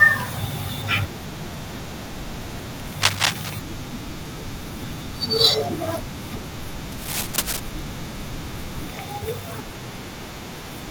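A speech recording carrying cable scratch noise in two bursts, from 2.97 to 3.50 s and from 6.92 to 7.60 s. Dense, irregular scratching sits a little above the speech in the first burst and roughly level with it in the second, likely from a worn cable or connector being moved.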